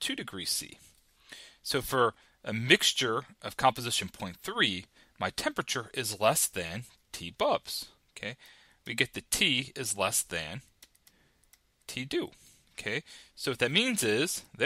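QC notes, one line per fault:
Nothing stood out on listening to this clip.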